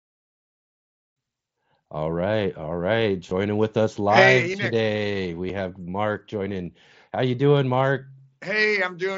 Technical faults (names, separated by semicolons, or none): concealed Bluetooth headset packet loss